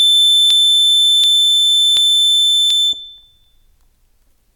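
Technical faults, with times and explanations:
0.50–4.17 s, clock drift buffer slips: around seven clicks recur every 0.74 s through the music, likely from two devices whose clocks differ by roughly a thousandth, so a buffer periodically drops or repeats a few dozen samples. The strict regular spacing separates them from random dropouts.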